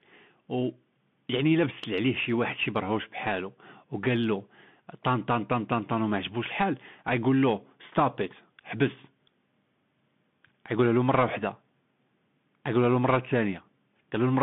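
From start to finish the speech passes through a Bluetooth CVSD headset codec, the narrowband link whose crude one-bit delta coding fits a 64 kbps stream. Only about 150 Hz to 3.5 kHz survives, so the sound is boxed-in and telephone-thin. The adaptive step size cannot keep up with steep, loud high content, leaving s sounds scratchy, with a grainy hiss underneath. A spectrogram shows a hard ceiling near 3.5 kHz and an empty floor below 150 Hz.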